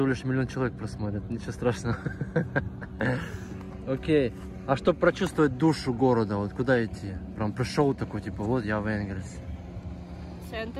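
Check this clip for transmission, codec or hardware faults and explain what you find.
Nothing in the signal points to a transmission, codec or hardware problem anywhere in the clip.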